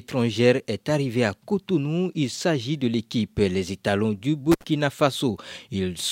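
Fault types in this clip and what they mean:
Intermittent contact: a loose plug or cable briefly loses its connection, so the signal path opens and then closes again. Here the speech cuts out once, around 4.52 to 4.64 s, with the line open for about 58 ms. What distinguishes it from a digital dropout or packet loss is the crackle of the contact scraping at each edge of the gap and the faint hiss left during the silence, rather than a clean, abrupt hole.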